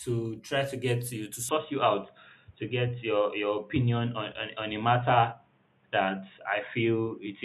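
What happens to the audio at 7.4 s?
At 7.4 s the speech is still dull and boxy, from 1.49 s, just after "to get you to", until 7.44 s. The input was likely switched to a poorer device: a spectrogram shows nothing above 3.8 kHz, and the waveform steps about 5 dB without a gap.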